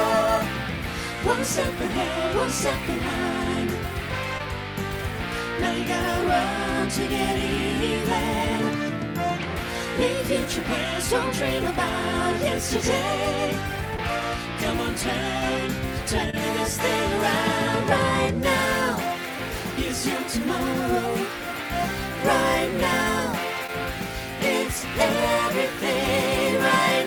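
Short concealed packet loss occurs four times, at about 4.38 to 4.41 s, 13.97 to 14.00 s, 16.30 to 16.35 s and 23.67 to 23.70 s. Each time roughly 20 ms of audio arrived too late for the decoder, and the receiver covered the gap by extending the preceding sound for 14, 12, 27 and 11 ms before fading back into the real signal. Each patch is heard as a brief smear or wobble where the missing material should be.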